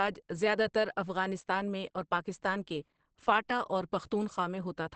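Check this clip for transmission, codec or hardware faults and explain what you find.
One codec fault runs through the whole speech clip. Opus compression, throughout: the encoder has likely dropped into its SILK speech mode, as expected at a low rate around 16 kbps. It caps the band, leaving nothing above 8.5 kHz, and the audio sounds plainly muffled and hoarse.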